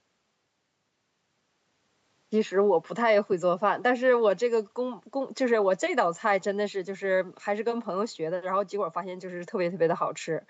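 No technical faults are audible.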